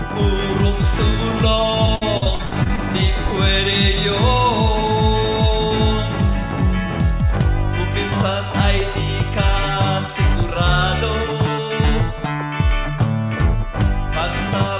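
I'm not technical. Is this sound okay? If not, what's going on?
No. From 1.86 to 2.79 s there is repeated packet loss (robotic sound): nine short dropouts, the longest about 63 ms, each patched by stretching the previous sound, so the audio turns choppy with pieces missing. The phone-style call path also limits everything to below 4 kHz.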